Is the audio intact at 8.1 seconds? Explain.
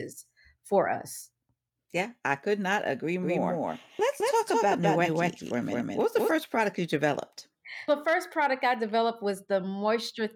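Yes, at 8.1 seconds the speech is intact, with no fault audible at that moment.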